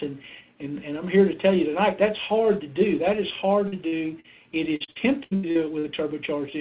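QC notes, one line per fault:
3.68–3.75, 3.88–3.95 and 4.20–4.27 s: short concealed packet loss. Three separate 40 ms holes were filled by continuing the preceding sound. Each is heard as a brief smear or wobble, not sustained choppiness.
4.76–5.86 s: repeated packet loss (robotic sound). Seven gaps, the longest 81 ms, were patched one after another over about a third of the stretch. The concealment piles up into choppy sound with pieces missing.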